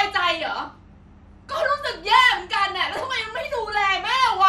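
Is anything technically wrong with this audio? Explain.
Yes. There are two problems: one runs through the whole speech clip, and the other appears in two short bursts.

MP2 compression: Throughout, the speech is dull and lacks top end, with a granular, gurgling edge on the remaining detail. The likely cause is MPEG Layer II coding at a rate around 80 kbps. The coder splits the signal into 32 sub-bands and shares out too few bits, so upper bands drop out and flicker while the lower bands are coarsely quantised.

DAB burbling: From 0.40 to 0.67 s and from 2.97 to 3.22 s, brief bursts of burbling sit over the speech. The first burst is the heavier one. This pattern fits bit errors of a few tenths of a percent getting past error correction into the MP2 stream. Corrupted samples put short blips of noise in single sub-bands, and corrupted scale factors make sub-bands jump in level for up to a frame.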